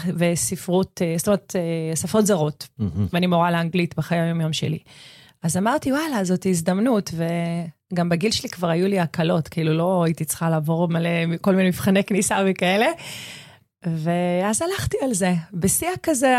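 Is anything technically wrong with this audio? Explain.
No, nothing is technically wrong with this audio.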